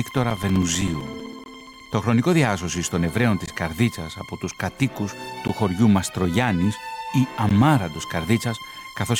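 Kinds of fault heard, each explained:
Periodic USB or driver dropouts: A background task is stalling the USB bus or audio driver on a fixed cycle, and each stall loses a few milliseconds of audio, replaced here by silence. From 0.11 s to about 1.93 s, short holes of roughly 4 ms arrive every 64 ms, around thirty in all. Because each one cuts the signal abruptly, they form an even train of ticks riding on the sound, stopping once the stalls end.
Gap at a join of encoded pieces: The audio was encoded in separate two-second pieces and joined without trimming the start-up delay and end padding each encoder run leaves, so a short silence sits at every seam. The gaps fall at 1.44 s (about 21 ms), then at 3.46 s, 5.48 s and 7.49 s (16 ms each), every 2 s. Each opens abruptly in the continuous sound, edges smeared, then the audio resumes where it stopped.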